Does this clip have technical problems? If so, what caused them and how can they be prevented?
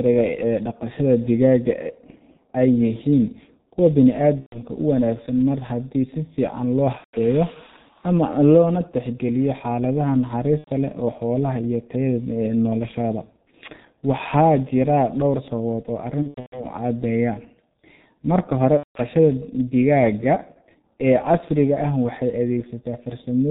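Yes. The whole speech clip carries heavy G.723.1 codec damage. The sound is band-limited, with nothing above 4 kHz, so it comes across muffled. The voice also has a hoarse, rough edge. Consonants smear together because the codec models the voice in coarse 30 ms frames and updates that model slowly. This fits its 6.3 kbit/s mode. To prevent this, use a wideband codec at a higher bitrate.

There are also five bursts of VoIP packet loss concealed by the speech codec. They fall at 4.40 to 4.60 s, 6.98 to 7.16 s, 10.58 to 10.70 s, 16.22 to 16.65 s and 18.77 to 18.98 s. The missing audio runs 120, 150, 90, 240 and 180 ms. The 16.22 s event is scattered over 300 ms, with its longest gap 120 ms. In each gap the decoder repeats its last pitch and filter and lowers the gain, so the voice turns into a fading buzzy tone or coloured noise, muted from the third lost frame in a row. It stays weak or distorted briefly after packets return. 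To prevent this, use a jitter buffer, forward error correction and a less congested network.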